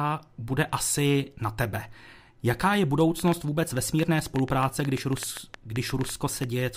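From 3.20 s to 6.45 s a train of clicks runs over the speech, around twenty short pulses of similar shape arriving at roughly 7.1 per second but with uneven spacing. Each click peaks well above the speech level, roughly 10 dB over it, so the ticking stands out clearly and carries through the pauses as well. The pattern is likely electrical interference from nearby equipment or a faulty connection or power supply.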